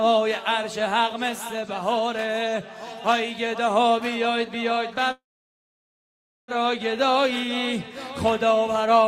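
From 5.11 s to 6.51 s the sound stops short: a brief fading buzz carries on from the last moment, then roughly 1.3 s of near-silence, after which the audio resumes exactly where it left off with nothing skipped. This is a call audio freeze, likely caused by packets stalling in transit so the jitter buffer emptied; the receiver padded about 1.37 s with concealment, pushing everything after it later by that amount.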